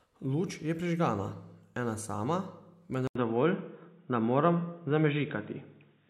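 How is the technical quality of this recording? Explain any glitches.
The second half of this speech recording is degraded. At 3.07 s, after an 80 ms gap, the sound turns dull and boxy, with nothing above 3.8 kHz, a level shift of a few decibels and faint new background noise. The likely cause is the input switched to a poorer device. Unlike a filter or codec bandwidth drop, the tone, level and noise floor all change together.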